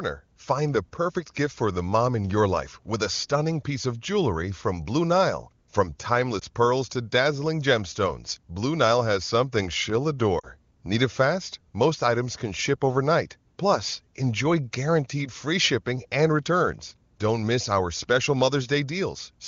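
At 6.40 to 6.45 s there's a short dip, and the gap fits a single 20 ms frame going missing. That's lost AMR speech frames: the frame failed its checksum, so the decoder patched it by reusing the last good pitch and vocal tract settings at reduced gain. A longer one follows at 10.39 to 10.47 s, about two frames' worth, where the sound sags toward near silence. The wideband AMR coding around both dropouts sounds clean, consistent with a high bitrate.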